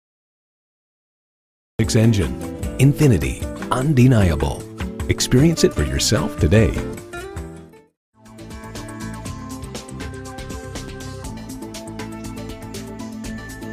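The audio has a cut-off start: pure digital silence runs from 0 to 1.79 s, then sound appears abruptly mid-event with no natural attack or fade-in. Unlike a mid-clip dropout, the silence sits only at the head, pointing to a recording that began late.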